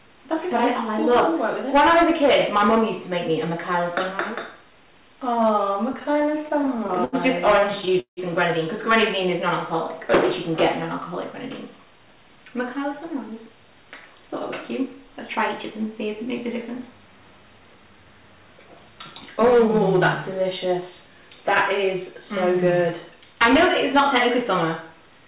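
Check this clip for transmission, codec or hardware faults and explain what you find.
Two kinds of fault are audible: repeated stalls (stutter) in two bursts, and a jitter buffer speed-up a few seconds later. The whole clip is band-limited with nothing above 4 kHz, which fits a G.711 call path.

Repeated stalls (stutter) run from 5.93 to 7.16 s (16 gaps, longest 80 ms) and from 7.61 to 8.20 s (7 gaps, longest 172 ms, about 39% of that span). Packets arrived late, so the receiver's buffer kept running dry and it extended the last sound to cover each gap, fading it in the longer ones. The sound drags and catches. On a spectrogram this shows as short smeared, repeated harmonic patches, and the waveform has faded dips.

The jitter buffer speed-up runs from 11.64 to 13.57 s at 107% speed, with around 150 ms removed. The buffer had grown too full, so the receiver cut out pitch-period-sized slices to reduce the delay. 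The audio sounds hurried but keeps its pitch. On a spectrogram, events are compressed in time while the harmonic spacing stays unchanged.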